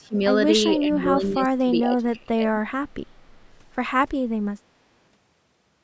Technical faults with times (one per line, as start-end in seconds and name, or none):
0.00-0.18 speech suppressed in double talk
0.78-2.60 speech suppressed in double talk